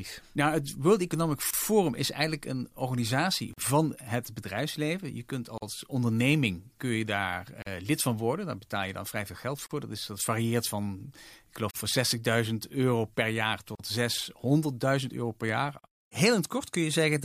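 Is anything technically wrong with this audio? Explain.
Yes. Gaps at a join of encoded pieces break the speech at 1.51 s (29 ms), then 43 ms at 3.53, 5.58, 7.62, 9.66, 11.71, 13.75 and 15.79 s. Separately encoded pieces were joined untrimmed, leaving start delay and end padding. On a waveform or spectrogram each shows as a blank column with smeared edges.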